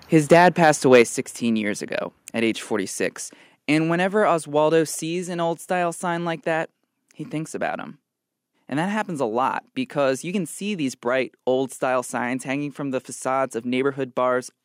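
From 0.31 to 1.02 s, the loudest peaks crackle harshly, likely microphone overload driving them about 4 dB past the converter's limit. At 1.02 s the level drops suddenly by about 5 dB. At 4.95 s, just before "an old style sign", it falls again by about 2 dB. Both are likely the microphone volume stepped down by the call software.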